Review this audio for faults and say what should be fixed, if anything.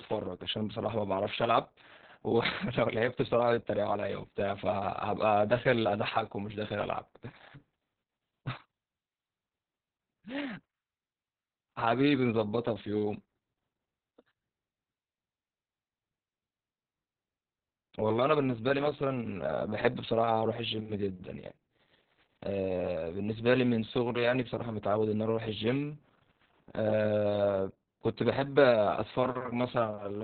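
Opus voice compression affects the whole clip. Nothing is present above about 4.5 kHz, so the speech sounds muffled and telephone-like. The linear-prediction coder rebuilds the excitation so coarsely that voiced sounds turn hoarse and slightly robotic. The narrowband, SILK-only character and the heavy damage suggest a bitrate around 6 kbps with long 60 ms frames, which starves the coder of bits for both bandwidth and detail. To prevent it, encode at a higher bitrate, at least 16 to 24 kbps for wideband speech, or keep an uncompressed master.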